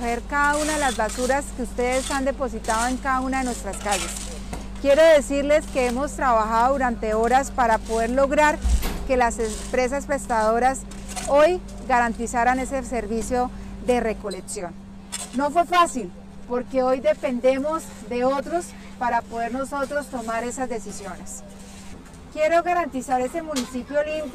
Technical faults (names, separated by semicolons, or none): channel delay (comb filtering)